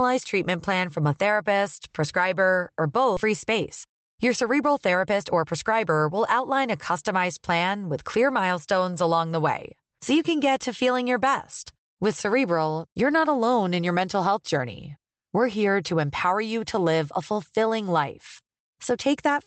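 From 3.15 s to 6.11 s the speech turns hurried, running about 14% fast while its pitch stays put, until "outline a customized plan" returns it to a normal pace. This is a jitter buffer speed-up. The receiver's buffer had built up more audio than its target, so it trimmed short slices of one or a few pitch periods again and again, cutting around 0.4 s of playback in total to bring the delay back down.

At 3.17 s, just after "a therapist prescriber or", the speech jumps forward with no gap at all. Roughly a second and a half of audio is gone, and the two sides are butted together. This is a skip ahead. Later audio was already queued, so a whole stretch was discarded rather than played, and the delay dropped by about that same amount at once. Throughout, the high end is band-limited in the way an Opus call path with 8 kHz bandwidth produces.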